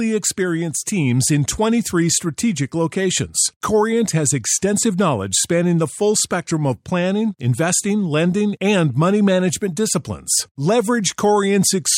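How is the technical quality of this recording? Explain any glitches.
Nothing stood out on listening to this recording, so there are no glitches to explain.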